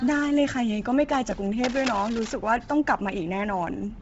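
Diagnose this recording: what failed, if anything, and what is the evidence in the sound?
The codec stage is the likely culprit: the speech appears to have passed through Bluetooth LC3 compression at a low rate, with damage heavy enough to fit roughly 24 kbps and 7.5 ms frames. The encoder has discarded most of the upper spectrum, leaving nothing above 7.7 kHz, and substitutes noise for missing detail. Throughout the clip this gives the voice a breathy, grainy edge and a dulled top end.

In the analogue wiring, a worn cable, connector or control was likely disturbed, and its contact resistance fluctuated rapidly. From 1.64 s to 2.34 s this cable scratch noise appears as dense, irregular bursts of scratching and rustling laid over the speech, sitting only around 10 dB below it. The noise comes and goes independently of the speech rather than following it, which points to a mechanical contact fault and not to the codec.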